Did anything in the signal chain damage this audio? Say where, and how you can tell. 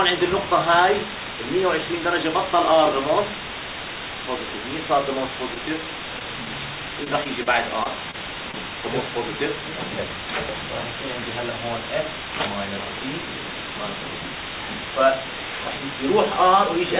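Yes. Sample-format conversion reduced the audio to 4 bits with dither, turning the rounding error into a steady, even hiss roughly as loud as the signal.

In the network path, a late packet drained the jitter buffer from 5.54 to 5.61 s. The receiver held the last sound for 20 ms, producing a stretched smear.

Packet loss from 6.19 to 8.55 s left about seven short gaps, the longest around 30 ms. Each gap was patched by continuing the sound, heard as ticks and hiccups.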